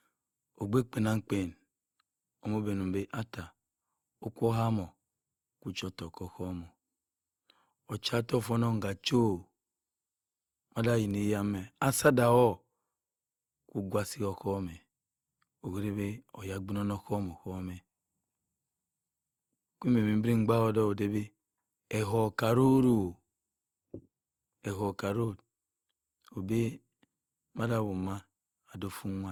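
From start to finish the speech sounds swirly, smeared and hollow, with consonant attacks blurred and nothing above 20.3 kHz. The likely cause is generation loss: the audio appears to have been encoded about three times with a lossy codec that sounds like Opus at around 64 kbit/s. Each pass quantised it again on a shifted frame grid, stacking noise.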